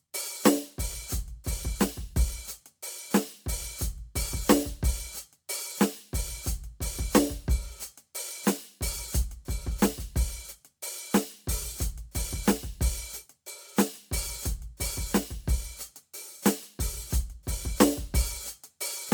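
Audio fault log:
throughout, generation loss: the music sounds swirly, smeared and hollow, with transients softened so attacks blur. This is likely from repeated MP3 decoding and re-encoding, perhaps around four passes, at a quality that points to roughly 128 kbit/s, each pass adding fresh quantisation noise on a shifted frame grid. On a spectrogram the upper bands are patchy with flickering holes, and nothing shows above 20 kHz. Waveform peaks at onsets look rounded.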